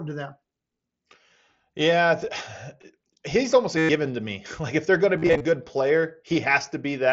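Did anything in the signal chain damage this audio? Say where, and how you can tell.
Yes. Concealed Bluetooth headset packet loss on the headset-to-phone radio link: a 112 ms gap at 3.78 to 3.89 s was filled by repeating recent waveform, a held buzzy tone that warbles as speech returns. From 5.18 to 5.45 s, scattered losses of 30 ms or less add up to 172.5 ms.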